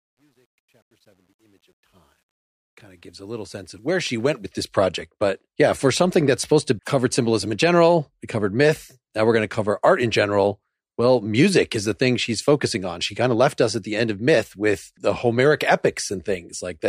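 The fade-in of this speech recording was computed with too few bits and no dither, which fits a 10-bit stage: truncation distortion on a fade from 0.0 to 4.51 s. Until 2.81 s the quiet level turns gritty before "this project".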